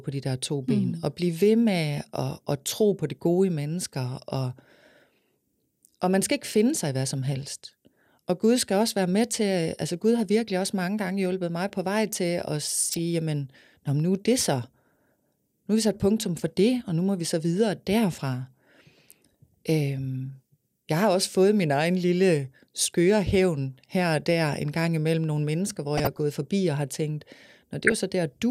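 DAB burbling hits this speech three times: 12.92 to 12.99 s, between "på vej til at" and "jamen nå nu er"; 25.97 to 26.19 s, after "imellem nogle mennesker hvor"; and 27.82 to 27.97 s, after "forbi og har tænkt". Weak reception lets a fraction of a percent of bits slip past error correction into the MP2 data, corrupting samples so single sub-bands get short blips of noise, and scale factors so sub-bands leap in level for up to a frame. Each burst is short.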